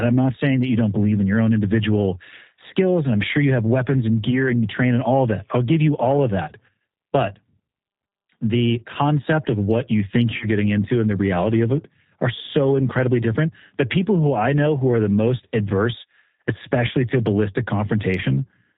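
G.729 codec damage runs through this speech recording. Nothing above 4 kHz comes through, and the voice sounds plainly rough and synthetic, which fits an 8 kbit/s G.729A stream that rebuilds each frame from a vocal tract filter, a pitch predictor and a few pulses. VoIP packet loss concealed by the speech codec occurs from 4.31 to 4.49 s, between "you have weapons and" and "and you train and", and again from 10.37 to 10.46 s, between "of what you think" and "getting into and the". About 20 ms and then 40 ms of audio went missing, consistent with one lost packet and then two. The decoder stretched its last pitch and filter across each gap with fading gain, and the voice stays weak until the frames rebuild.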